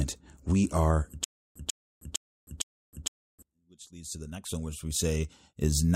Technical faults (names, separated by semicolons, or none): stutter with silent gaps